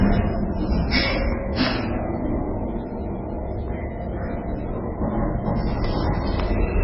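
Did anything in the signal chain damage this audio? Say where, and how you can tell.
Yes. The damage sits at the codec stage and runs through the whole clip: it is likely MP3 compression. Nothing survives above 5.5 kHz, a hard treble ceiling, and the heavy damage left below it fits a bitrate as low as 16 kbps. Starved of bits, the encoder dropped the top band and zeroed weak frequency lines frame by frame, giving a watery, swirling texture. A plain analogue low-pass would dull the top just as cleanly without that shifting, bubbly character.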